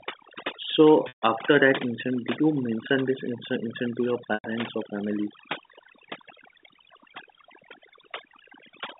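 Overdone noise removal runs throughout this telephone-band speech recording: aggressive spectral gating mutes bands near the noise estimate, leaving near-silent gaps with twinkling specks. Packet loss with pitch repetition appears at 1.08 to 1.22 s, just before "after that incident did," and at 4.34 to 4.44 s, between "incident to your" and "or family." Each gap of 140 ms and 100 ms is bridged by repeating the last pitch period, which fades to silence before the speech cross-fades back in. The G.711 line, heard as a band of roughly 200 Hz to 3.7 kHz, is working normally.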